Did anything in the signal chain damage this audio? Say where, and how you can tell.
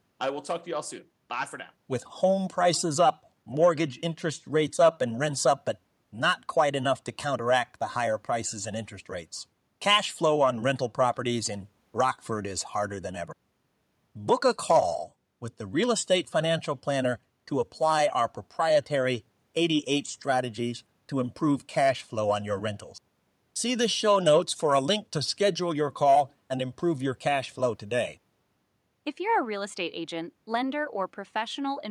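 No, nothing along the chain has damaged this speech recording; its level, continuity and timing hold steady with no break, distortion or dropout anywhere in the signal.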